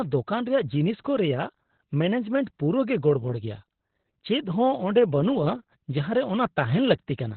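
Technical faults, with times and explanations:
Throughout, Opus voice compression: nothing reaches above about 4.3 kHz, so the speech sounds muffled and boxy, and it also comes out hoarse and faintly robotic because the excitation is coded very coarsely. That roughness separates it from a plain low-pass filter, which would dull the sound without adding grain. The narrow band and heavy damage fit the linear-prediction voice mode running near 8 kbps with 20 ms frames.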